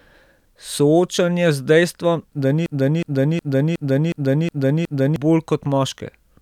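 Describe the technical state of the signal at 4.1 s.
At 4.1 s the speech is caught in a stutter: a single fragment of about 0.37 s plays over and over, back to back and identical each time, from 2.66 s to 5.16 s, right after "z dejstvom da". This is a broken-record loop, with the piece heard seven times. It is likely that the player or stream stalled and kept resending its last buffered fragment, so whatever should have followed in those 2.5 seconds is lost.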